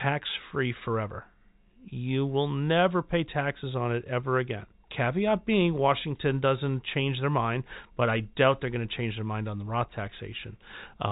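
There are no technical faults to describe in time order: the speech comes through the G.711 telephone coding as expected, with nothing above about 3.8 kHz.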